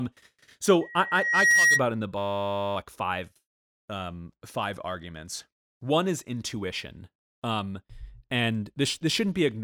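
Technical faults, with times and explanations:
0.81–1.84 s, loudspeaker feedback squeal: a pure tone near 1.9 kHz swells over roughly 0.7 s into a piercing squeal around 10 dB above the speech. The microphone is picking up its own loudspeaker, and at that frequency the loop gain exceeds one, so the tone keeps feeding itself.
2.18–2.76 s, system hang loop: the sound turns into a steady 100 Hz buzz as one 10 ms slice of audio repeats exactly, dozens of times in a row. The computer or driver stalled while the audio hardware kept replaying the same short ring buffer.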